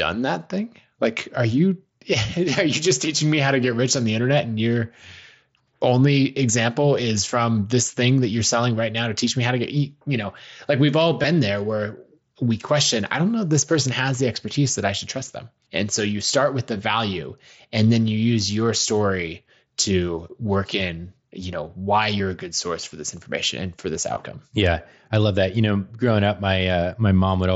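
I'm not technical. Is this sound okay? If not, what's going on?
No, not quite. There's concealed Bluetooth headset packet loss: tiny dropouts between headset and phone, patched over by repeating the last sliver of speech, at 11.22, 16.78, 17.94, 22.18 and 24.15 seconds.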